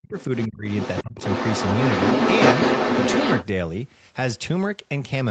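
The echo canceller likely could not tell the talker from loudspeaker echo during double talk, so speech was suppressed in double talk from 0.0 to 0.17 s. The opening drops by roughly 40 dB, nearly vanishing. From 0.19 to 0.48 s the other side's voice is leaking through, likely because the canceller left residual echo in the microphone signal. It sits faintly, about 20 dB under the talker. Double-talk suppression returns from 0.47 to 0.67 s, pulling the speech down by around 25 dB. From 0.67 to 3.46 s the leaked far-end voice comes through strongly, roughly as loud as the talker or slightly louder. Within that stretch, from 1.03 to 1.22 s, the talker is ducked again by about 30 dB.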